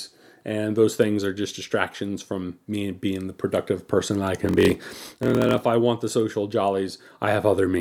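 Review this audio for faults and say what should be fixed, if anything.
From 4.40 to 5.63 s the speech has a block size mismatch (padded). Each block arrives short, and zeros fill the rest. These gaps produce a 43.1 Hz buzz, which fits a 1024-sample read block. The speech runs at 0.938 times normal speed, at about its normal pitch. To prevent it, make the writing stage deliver blocks of the same size the reading stage expects, or buffer between them.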